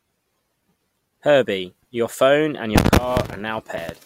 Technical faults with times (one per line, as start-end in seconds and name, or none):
3.75 compressed frames skipped